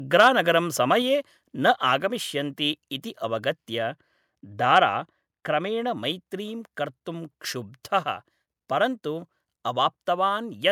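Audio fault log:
0.19–0.28 s and 4.76–4.78 s, microphone overload: the loudest peaks run past the converter's limit, by about 3 dB in the first burst and about 2 dB in the second, so their tops are sliced flat. A few percent of samples in each stretch sit pinned at the limit, and those squared-off waveforms add a harsh, crackly edge to the sound. The likely cause is microphone input gain set high enough to drive the converter into its ceiling.
1.02 s, microphone volume stepped down: shortly after the first clipped burst, the whole signal, foreground and background alike, drops by about 3 dB in a single abrupt step rather than a smooth fade. That pattern, an overload followed by one discrete level cut, points to call software detecting the hot input and likely lowering the device's capture volume in one step to stop further clipping.
3.79–5.97 s, de-emphasis applied wrongly: across this span the top end rolls away on a gentle, continuous slope, sitting about 8 dB lower at 10 kHz than at 1 kHz. 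That smooth tilt comes from a treble-cut filter meant to undo pre-emphasis, acting on audio that carried none or receiving it a second time. With nothing to cancel, it simply strips brightness, leaving the sound dull and muffled until the span ends.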